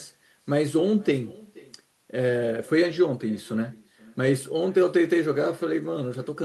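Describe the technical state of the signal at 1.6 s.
At 1.6 s the speech is trailed by a faint, thin repeat of itself arriving about half a second later, sitting roughly 23 dB below the direct sound, and this shadow runs through the whole clip rather than just this moment. It is echo with no canceller: the far end plays the call over a loudspeaker, its microphone picks that playback up again, and nothing subtracts it, so the talker's own voice returns after the network round trip.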